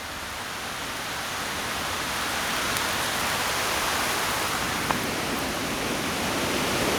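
A recording of sounds, with no audible technical fault anywhere in the signal.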